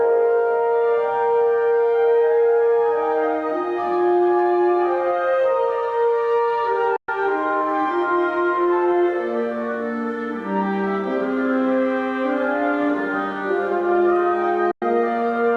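At 6.96 s the sound cuts out for about 116 ms, returning at 7.09 s, and the same happens again from 14.71 to 14.82 s for about 102 ms. Each gap is likely a Bluetooth dropout, where packets missed their delivery window to the headphones and were discarded. Unlike a stutter or buffer underrun, the sound doesn't pick up where it stopped. It resumes further along, as if it had kept playing through the silence.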